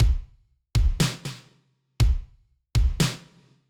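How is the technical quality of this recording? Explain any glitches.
No glitches to report; the recording holds up technically throughout.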